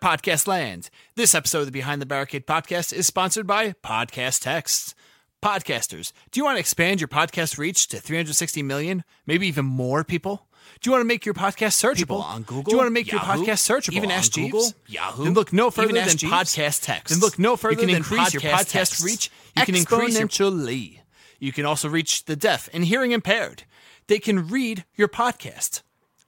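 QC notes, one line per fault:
11.94–20.26 s, doubled audio track: a full-band second copy of the sound runs about two seconds behind at roughly equal level. It has no decay or room colour and starts and stops abruptly, likely from a slower second capture path or an out-of-step edit.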